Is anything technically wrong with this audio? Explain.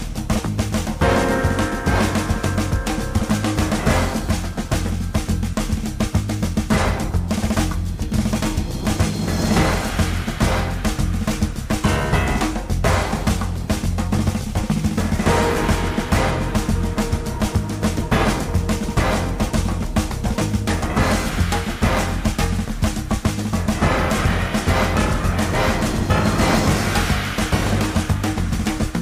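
Yes. Sample clock jitter runs through the whole clip: the converter's clock wanders by roughly 2 microseconds, so each sample lands a little early or late. Where the waveform moves fastest, that timing slip becomes an amplitude error, here roughly 35 dB below the signal, heard as a fine hiss or roughness on loud, bright passages. Unlike a steady noise floor or dither hiss, it tracks the sound and disappears in the quiet gaps.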